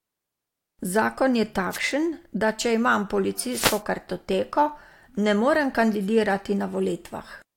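At about 1.70 s there's a quick wireless microphone noise hit, roughly a tenth of a second of swishy static, and a longer one follows at 3.50 to 3.82 s, right after "da če imam". Both sound like the radio link from an analogue FM mic dipping as reflected signals cancel at the receiver, so its own noise surges up over the speech.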